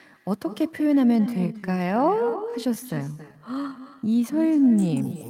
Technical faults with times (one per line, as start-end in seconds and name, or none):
0.00-5.30 echo with no canceller
1.06-5.30 time-stretched section